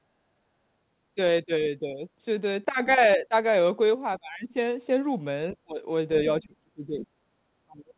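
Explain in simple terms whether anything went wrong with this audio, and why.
Yes, something went wrong. The talker's voice keeps sinking, thinning out or partly vanishing at 1.46 to 2.05 s, 3.17 to 3.34 s, 4.19 to 4.55 s, 5.65 to 5.80 s, 6.40 to 7.27 s and 7.66 to 7.94 s. The dips get deeper toward the end. This is likely speech suppressed in double talk: both ends spoke at once, and the echo canceller mistook this voice for echo and turned it down.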